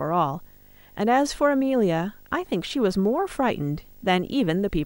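Speech with video or display buzz throughout: a 50 Hz field-rate buzz with hash above it, about 30 dB below the speech, plus a thin 15.6 kHz line-rate whine that mains hum lacks.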